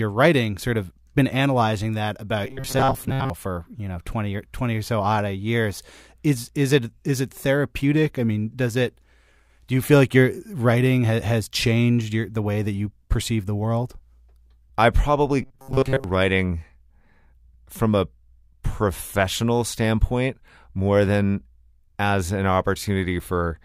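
From 2.45 to 3.30 s, between "been analyzing that about" and "for you know", and again from 15.42 to 16.04 s, the speech becomes a rigid metallic buzz at 134 Hz. This is robotic sound from repeated short buffers, likely from a roughly 7.5 ms chunk replayed over most of the passage.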